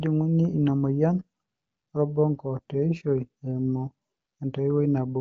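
No technical faults detected.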